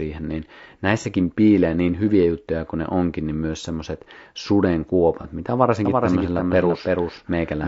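Throughout, the speech sounds rough and grainy, with noise filling the gaps between harmonics, likely from low-delay AAC compression (AAC-ELD) at a bitrate around 32 kbps.

At 1.01–1.05 s and again at 5.21–5.26 s, a brief smeared, noisy patch replaces the sound. This is AAC frame loss with concealment, where the decoder invents about 30 ms from the previous spectrum, which fits one lost frame each time.

From 5.85 s to the end, a dry, full-band copy of the speech trails roughly a third of a second behind, a few decibels quieter, and starts abruptly. This is a doubled audio track.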